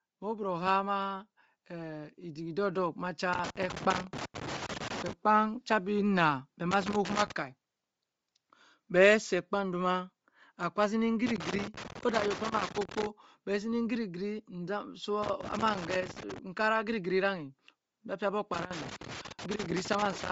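Right from the start the whole speech clip has a breathy, grainy edge, with the top end thinned out and partly replaced by hiss. That's likely Bluetooth LC3 compression at a low rate, something around 32 kbps with short 7.5 ms frames, starving the upper spectrum and noise-filling it.

Between 0.2 and 2.97 s you can hear automatic gain rising. The AGC decided the input was too quiet and pushed its gain up by about 8 dB, so the voice and the background swell together over those few seconds.

Then the loose connector crackle kicks in, in irregular scratchy bursts from 3.33 to 5.13 s, 6.71 to 7.32 s, 11.26 to 13.06 s, 15.23 to 16.38 s and 18.54 to 20.30 s. A worn or dirty contact keeps making and breaking, chopping the signal into that rough, spitting texture.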